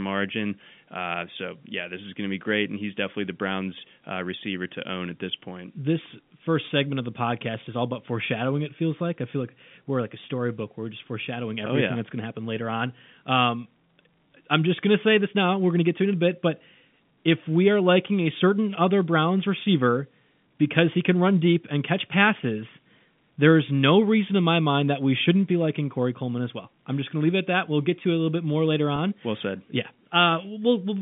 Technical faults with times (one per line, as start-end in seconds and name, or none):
28.96-28.98 packet loss with pitch repetition